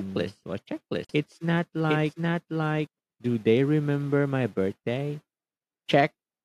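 A speech clip in which a doubled audio track is already under way from the start and runs until it cuts off abruptly at 2.87 s. A second full-band copy of the speech trails the original by roughly 0.7 s, at about the same level, with no decay or room colouring. That points most likely to a second, slower capture path mixed in alongside the first. On a spectrogram, each harmonic pattern reappears intact about 0.7 s later and overlaps the next syllables. The waveform shows the two copies summed until the trailing one stops dead at 2.87 s. A gap at a join of encoded pieces also opens from 1.05 to 1.09 s. A 48 ms gap drops into continuous sound, and the sound then resumes exactly where it left off. This is what happens when separately encoded segments are spliced without trimming the encoder's start-up delay and end padding. On a waveform it is a flat notch with slightly smeared edges. On a spectrogram it is a thin vertical blank band across all frequencies.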